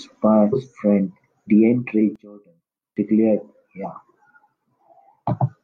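Damaged data in the compressed stream at 0.49 to 0.55 s: a stretch of corrupted bytes makes the decoder misread those frames and lose sync until it finds the next valid header, leaving a short glitch.

From 2.16 to 2.97 s the speech drops by about 24 dB, as the centred voice nearly cancels out. The likely cause is one channel inverted: with reversed polarity, summing to mono removes everything common to both sides.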